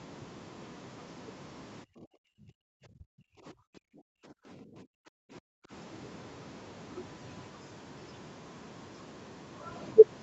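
From 1.84 to 2.7 s, and again from 3.31 to 5.71 s, the room sound sinks by about 40 dB and returns: background gated by the echo canceller, which clamped the microphone while the loudspeaker played. Between those, from 2.98 to 3.03 s, the speech briefly dips, a deep dip of around 30 dB, likely speech suppressed in double talk when the canceller mistook both sides for echo.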